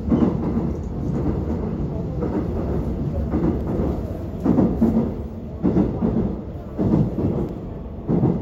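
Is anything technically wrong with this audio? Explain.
Yes, there are two kinds of fault.

Block of digital silence: at 3.61 s and again at 7.49 s the sound drops out abruptly for a fraction of a moment, heard as a sharp tick rather than a gap. The first hole lasts 0.73 ms, the second 2.18 ms. In each case a run of samples was replaced by zeros, most likely because the output buffer wasn't filled in time. The signal jumps straight to silence and back without any fade, and those hard edges produce the click.

Damaged data in a compressed stream: at 6.53 s there is a brief disturbance, about 16 ms long, that doesn't belong to the surrounding sound. Part of the encoded stream there was corrupted, so the decoder misread or refused those frames. It lost synchronisation and had to search for the next valid frame header before normal decoding resumed, and that is what the disturbance is.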